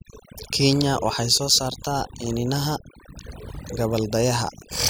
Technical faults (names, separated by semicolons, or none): overdone noise removal